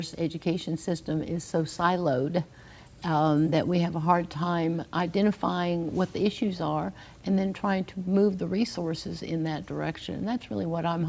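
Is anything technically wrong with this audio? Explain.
No, nothing here sounds technically off; it's all in good shape as far as the ear can tell.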